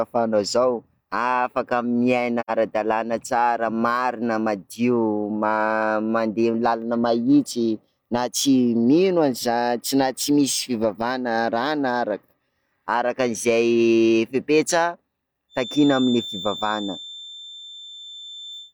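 From 2.40 to 2.50 s, AAC frame loss with muting leaves a soft-edged, roughly 85 ms gap in the speech, which fits two lost frames, faded out and back in. From 15.48 s to the end, a thin 3.6 kHz feedback whistle that slowly swells and fades sits around 15 dB below the speech, likely from a loudspeaker-to-microphone loop held just at the edge of feedback.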